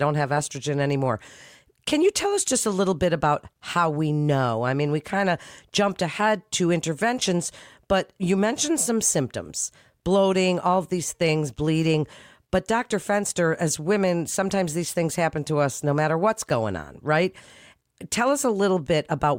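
A speech recording with no technical faults to be heard anywhere in it.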